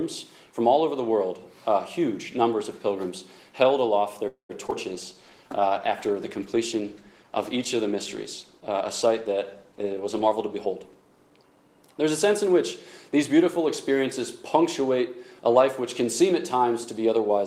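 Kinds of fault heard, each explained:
call audio freeze: At 4.27 to 4.51 s the audio stalls for about 0.22 s. The last sound is drawn out and fades, then there is about 0.12 s of silence before the audio resumes from the point where it stopped. The likely cause is packets held up in transit, which left the jitter buffer empty. The receiver padded the wait instead of skipping ahead, so a gap was inserted and nothing was lost.
short concealed packet loss: Two back-to-back holes occur, at 4.67 to 4.70 s and 4.70 to 4.73 s, just after the freeze. Audio that arrived too late to decode was dropped, about 40 ms and then 20 ms of it. The receiver covered each hole with roughly 10 ms of extrapolated sound before blending back into real audio. The result is a brief smear or wobble.
call bitrate drop: From 4.92 to 12.05 s the encoder's budget is cut from 32 to 16 kbps after the call's bandwidth estimate fell. 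It stays at the lower rate for about 5.5 s. With half the bits, Opus quantises the signal more coarsely and trims the upper frequencies, so the audio turns duller and rough or watery across that stretch. It clears only once the bitrate climbs back.
jitter buffer slow-down: Between 5.14 and 5.49 s the receiver stretches the audio to rebuild its reserve after the disruption just before. It repeats single pitch periods or slivers of pauses again and again, adding about 52 ms in total. Playback runs at about 87% speed while the pitch stays put. Sounds in that span are audibly drawn out.
jitter buffer speed-up: From 9.72 to 11.31 s the receiver has more audio queued than it targets and trims the excess. It cuts short pieces of one or a few pitch periods many times in succession, removing about a fifth of a second altogether. Playback runs at about 114% speed while the pitch is unchanged, so this stretch sounds hurried and compressed in time.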